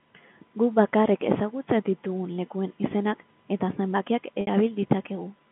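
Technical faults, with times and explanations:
4.41 to 4.47 s, packet loss with pitch repetition: about 60 ms of the telephone-band speech goes missing, which points to two lost packets. The receiver bridges the gap by looping the last pitch period it received, so the sound briefly holds on one slightly buzzy tone instead of breaking off. That repetition fades over roughly 50 ms, dipping toward silence before fresh speech returns through a short cross-fade.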